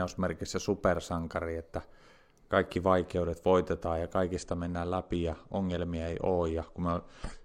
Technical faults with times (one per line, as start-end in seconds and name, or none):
4.36-7.44 adaptive stream at a lower bitrate